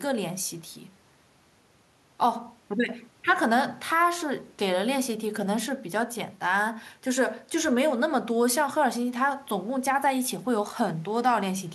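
Speech recording, no audible technical faults.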